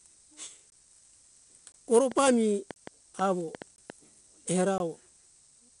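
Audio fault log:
Throughout: 4-bit ADPCM compression. Each sample is coded as a coarse 4-bit step from a predicted value, so the quantisation error becomes broadband noise that rises and falls with the speech level. It is heard as gritty hiss riding on every loud syllable, with roughness on sharp onsets where the adaptive step lags behind. Unlike steady background hiss, it vanishes in quiet passages. Nothing reaches above 10.6 kHz, which dulls the top end and fits a rate near 88 kbps.
0.70–0.72, 1.72–1.74, 2.74–2.76, 3.76–3.78 and 4.78–4.80 s: gap between chunks. The audio was delivered in 1.0 s blocks, and a 20 ms stretch of silence sits at each join. Nothing is missing. The sound simply stops and restarts, so each hole has hard edges. What separates these from dropouts or clicks is the strict spacing: one hole roughly every 1.02 s, each one the same length, whatever the speech is doing.
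2.12–3.91 s: train of clicks. Roughly ten short pulses of much the same shape land over the speech at an uneven pace, averaging about 4.6 per second and peaking around 10 dB above the signal. They are likely caused by electrical interference or a struggling interface. Unlike the chunk gaps, these add sound rather than removing it, and they come irregularly instead of on a fixed one-second grid.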